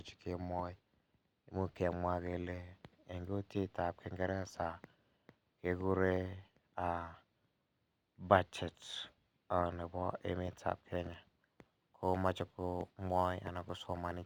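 From 11.28 s to the end, the speech shows crude rate conversion. The sound points to a 48 kHz to 44.1 kHz change made by simply dropping samples, with no filtering. That leaves a periodic timing error that generates shifted, inharmonic copies of the speech, sitting roughly 30 dB below it. It comes across as a gritty, inharmonic fizz riding on the louder and brighter parts of the speech.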